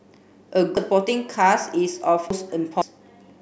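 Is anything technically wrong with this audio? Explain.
Yes. There are abrupt forward jumps in the speech at 0.77, 2.30 and 2.82 s. The likely cause is a dropped buffer (overrun): samples were overwritten before being read, so the audio joins directly across gaps of about 0.3, 0.5 and 0.5 s.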